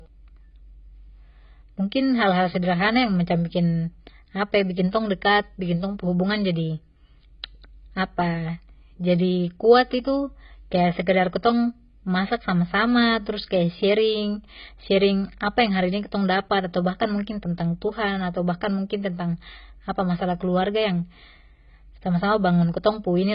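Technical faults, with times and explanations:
Throughout, AAC compression: the speech sounds dull and smeared, with nothing above 5.1 kHz and a warbling, fizzy texture on sibilants. The likely cause is heavy AAC-LC coding at a bitrate near 16 kbps, which lowers the cut-off and leaves spectral holes.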